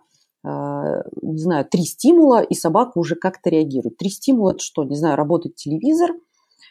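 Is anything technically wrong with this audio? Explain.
Yes. From 4.49 to 4.57 s there is AAC frame loss with muting. About 40 ms of sound drops out in brief gaps of roughly a frame each, scattered over 80 ms. The decoder zeroes each lost spectrum, and overlapping windows fade around it. The gaps sound soft-edged. The codec's light low-delay roughness is likely from AAC-ELD.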